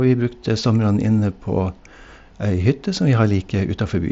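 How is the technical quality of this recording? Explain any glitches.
No glitches to explain here: the speech comes through a Bluetooth mSBC headset link at 61 kbps, and nothing in the recording goes wrong along the way.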